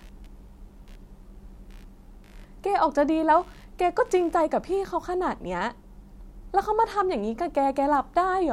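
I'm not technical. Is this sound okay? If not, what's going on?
No. From the start to about 5.04 s there is computer activity noise: the computer's changing workload disturbs the audio wiring, adding a faint scratchy buzz under the speech, pulsing about seventy times a second.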